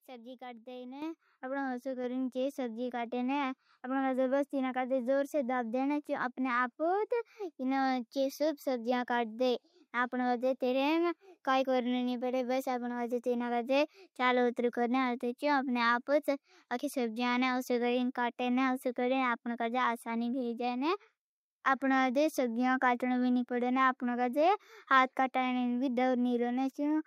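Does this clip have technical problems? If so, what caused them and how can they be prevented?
Yes. At 1.02 s the microphone volume stepped up by about 8 dB: software raised the input gain in one step, lifting speech and background together, unlike a talker moving closer. Prevent it by disabling automatic microphone gain adjustment and setting the input level manually.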